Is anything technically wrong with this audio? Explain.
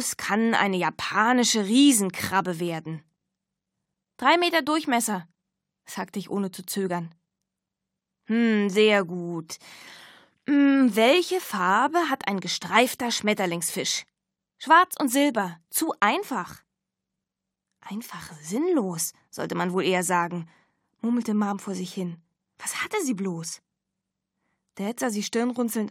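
No, nothing in the signal points to a technical problem; it holds steady throughout, with no audible disturbance at any point.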